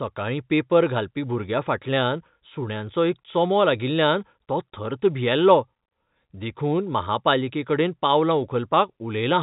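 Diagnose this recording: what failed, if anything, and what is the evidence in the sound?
Nothing in this speech recording has failed at any stage. The band stops at about 3.8 kHz, which is what ordinary G.711 telephone coding does when the path is working normally.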